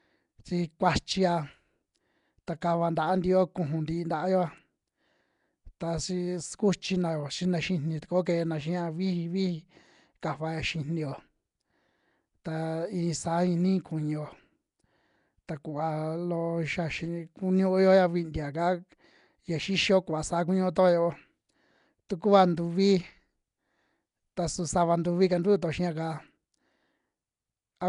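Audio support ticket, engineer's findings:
Rough, hissy halo and smeared, underwater quality across the whole speech track. Nothing above 10.6 kHz. Damage plainly audible. Likely cause: Nellymoser compression (Nellymoser Asao), fixed low bit allocation starving weak bands and filling them with noise. Sound fits roughly 44 kbps.

Pre-echo at 2.47 s, just before "ta kava", again at 2.61 s and 22.09 s. Brief hiss about 10 ms ahead of each sharp attack, attack softened. Transform codec spreads block quantisation noise into the quiet moment before the onset.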